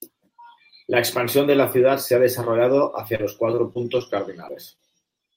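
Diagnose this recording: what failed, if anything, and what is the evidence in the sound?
Network packets went missing repeatedly from 3.15 to 4.02 s, right after "se ha desarrollado hacia". The four concealed gaps, the longest 36 ms, make the speech choppy and robotic.

Short concealed packet loss, also at the network stage, struck at 4.48 to 4.51 s and 4.75 to 4.80 s. The decoder extended the preceding sound, leaving brief smears.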